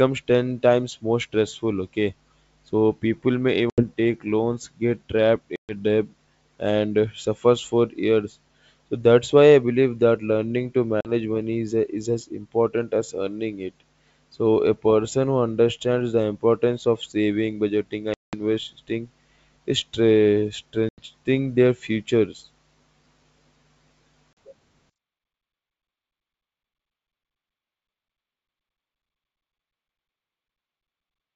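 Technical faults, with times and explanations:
3.70–3.84, 5.56–5.72, 11.01–11.10, 18.14–18.36, 20.89–21.01 and 24.33–24.37 s, packet loss on an ADPCM call: six hard-edged dropouts, running from 40 ms up to 190 ms. The 11.0 s gap falls right after "believe that learning to", the 18.1 s one comes after "importance of saving budgeting", and the 20.9 s one sits just before "their futures". Each run of missing packets was filled with silence, so the decoder's adaptive predictor and step size lost track of the sender's. When the sound comes back it is slightly distorted, then settles over a few tens of milliseconds. The wideband G.722 path can be heard carrying the sound fine between holes.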